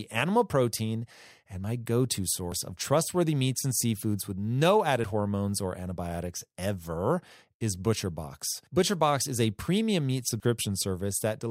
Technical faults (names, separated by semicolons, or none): dropped buffer (overrun)